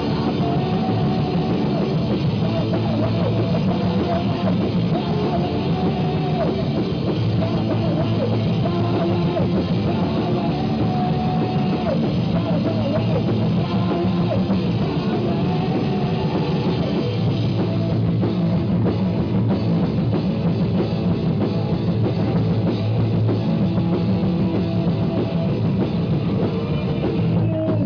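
No technical faults can be heard anywhere in this audio.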